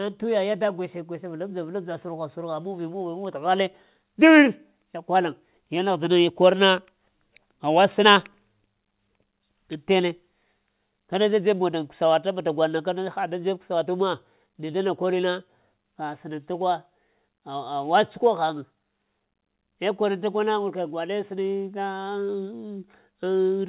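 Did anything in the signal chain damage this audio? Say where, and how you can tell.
No, nothing in the chain damaged this speech; it passed through a call path whose band stops at 4 kHz, which fits narrowband G.711 mu-law coding at 64 kbps, and that limit is the expected behaviour of that codec.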